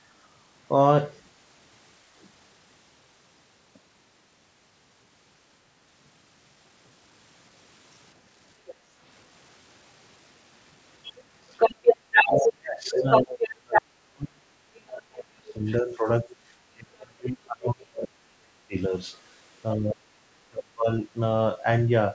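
At 8.65 s the background is gated by the echo canceller. The room sound dips by about 7 dB for a couple of tenths of a second, within the span to 8.98 s. The canceller heard loudspeaker output and pulled the microphone down. The background then comes back. This gating leaves a brief hole in the ambience.

Inside that gap, from 8.66 to 8.74 s, a faint second voice sits well below the speech. This is likely the other side's voice leaking through. The loudspeaker played the far end, and the canceller did not remove all of it. It happens again from 11.03 to 13.82 s. This time the leak is strong, a little louder than the talker. It returns faintly from 15.5 to 16.36 s.

From 12.22 to 18.93 s, the talker's speech drops out in pieces. The cuts are deep, roughly 35 dB, and add up to around five seconds. This is speech suppressed in double talk. Both sides spoke together, and the canceller likely could not tell its own talker from the echo. 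So it turned everything down. The same chopping recurs from 19.75 to 21.02 s, for about a second.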